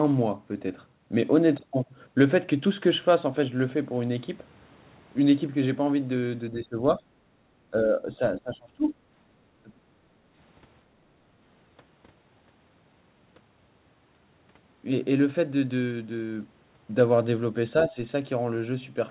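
From 6.51 to 8.94 s, the echo canceller most likely could not tell this talker apart from the far-end echo while both sides spoke at once, so it pulled the speech down as though it were echo. This is speech suppressed in double talk. It comes in three stretches: 6.51 to 7.02 s, 7.71 to 8.21 s and 8.38 to 8.94 s. In the first two the voice sags by roughly 10 dB. In the third it falls by around 20 dB.

Inside that last dip, from 8.88 to 8.93 s, the canceller likely failed to strip all of the loudspeaker playback from the microphone. This is the other side's voice leaking through. It is only a faint scrap, some 30 dB below the talker.

The same double-talk suppression returns from 9.58 to 9.81 s. This is the deepest cut, at roughly 25 dB.

From 10.09 to 10.22 s the canceller clamped the microphone hard while the loudspeaker played. This is background gated by the echo canceller. The room sound ducks by about 15 dB for a brief instant, then comes back once the canceller releases.

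At 17.89 to 17.97 s, a final short double-talk dip of about 10 dB clips the speech. Throughout, the call path's G.711 coding caps the audio at 4 kHz, as expected.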